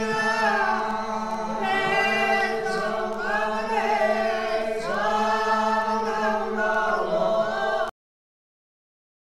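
At 7.89 s the audio is cut off mid-sound, a cut-off end. The final buffers were never written or played. There is no decay or fade. The signal drops straight to digital silence, which lasts from there to the end of the clip.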